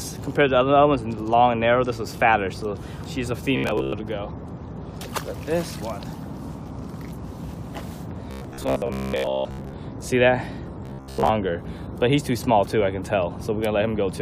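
Three stretches of robotic sound from repeated short buffers turn the audio into a stiff metallic buzz at about 66.7 Hz, from 3.57 to 3.93 s, 8.31 to 9.73 s and 10.86 to 11.29 s. The likely cause is audio arriving too late, so most of each stretch is a loop of the last 15 ms.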